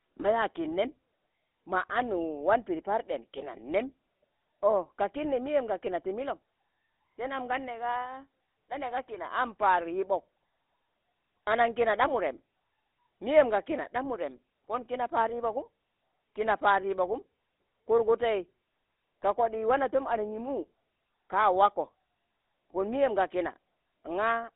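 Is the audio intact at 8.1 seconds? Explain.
No. At 8.1 seconds, as throughout the clip, the sound carries GSM full-rate codec damage. A vocal-tract model driven by sparse, regular pulses, consistent with a 13 kbps coder, gives a buzzy, gravelly roughness. Plain band-limiting to 250 Hz–3.7 kHz would only sound dull.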